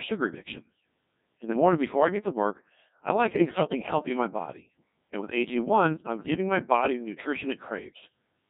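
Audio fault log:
throughout: Codec 2 vocoder. The speech is heavily processed, robotic and buzzy, which is consistent with Codec 2 running at about 1.6 kbit/s. At that rate only pitch, voicing, energy and a coarse spectral envelope survive transmission. The decoder rebuilds each frame from sine waves instead of the original waveform, so natural texture and breathiness are gone, and the voice takes on a synthetic, hollow tone.
3.49 to 3.82 s: bit errors on digital voice radio. For about a third of a second the synthetic voice breaks into warbles and abrupt jumps in pitch, level and tone colour. The extent suggests around seven corrupted frames, at an error rate of roughly several percent. In so sparse a bitstream each flipped bit redefines pitch, gain, voicing or spectral shape for a whole frame, so the decoder produces bleeps and garbled, robotic sound until clean frames resume.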